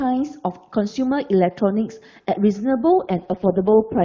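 From 2.99 s to the end, the speech turns rough, raspy and synthetic, though the band stays as wide as before and nothing drops out. This is an AMR rate drop: the network has pushed the AMR-WB codec to its lowest rate, which fits a fall from 23.85 to 6.6 kbit/s, so bits move from the voice model to error protection. Before that point the HD Voice coding is clear, with faint or no codec damage.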